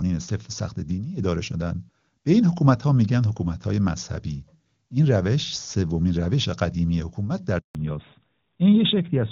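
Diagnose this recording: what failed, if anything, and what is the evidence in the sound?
The speech cuts out abruptly at 7.59 s and stays silent until 7.75 s, a hole of 160 ms, with the voice dying away within a few tens of milliseconds. This is a handover gap at the network stage: no speech frames arrived while the call switched between networks.

From 7.75 s to the end, the voice turns duller and rougher, with nothing above 4 kHz, whereas the earlier clear HD Voice carried the upper band. This is a fallback to narrowband at the codec stage after the handover, consistent with AMR-NB at its top rate.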